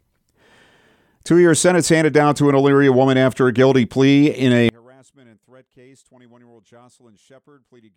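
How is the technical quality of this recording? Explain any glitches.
The recording has one clear glitch. From 4.69 s to the end at 7.97 s, the sound abruptly drops by about 34 dB, leaving only a faint remnant in place of the full signal. The likely cause is one channel inverted: one stereo channel has its polarity flipped, so when left and right are summed to mono, the material common to both cancels. Only the small difference between the channels survives, which is why so little remains.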